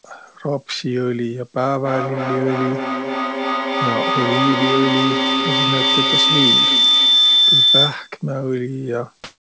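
From 1.83 s to 8.21 s a piercing tone near 4 kHz swells and pulses roughly every 300 ms, peaking about 6 dB above the speech. This is feedback howl: two devices in the same room form a microphone-to-loudspeaker loop whose gain exceeds unity, so each pass reinforces that frequency.

At 9.24 s the room tone gives way to a flat, featureless hiss for the final 0.36 s, shifting level by about 18 dB. This is comfort noise in place of the background, likely because the sender paused transmission and the receiver substituted synthetic noise.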